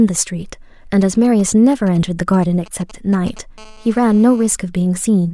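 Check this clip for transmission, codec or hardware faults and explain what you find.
Two bursts of mobile-phone interference sit under the speech.

From 0.94 to 3.39 s there is a galloping dit-dit-dit of brief 217 Hz buzzes, roughly 25 dB below the speech. These are GSM signalling bursts: a nearby 2G phone sends short groups of radio bursts while signalling, and the audio circuitry rectifies them into sound.

From 3.58 to 4.48 s a hard, raspy, harmonic-rich buzz at 217 Hz holds steady, about 29 dB below the speech and unrelated to it. This is GSM phone buzz: the phone, now in a call, transmits 217 bursts per second, and the rectified pulses become a continuous buzz.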